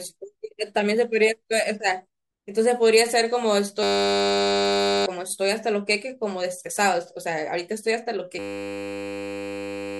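A steady, flat buzz at 100 Hz replaces this speech recording from 3.83 to 5.06 s, and again from 8.39 s to the end of the clip. Each is a system hang loop: the machine or driver froze while the audio hardware kept replaying the same ring buffer, so one 10 ms slice repeats exactly, which fits a 10 ms buffer. Around a second and a half of speech is missing each time.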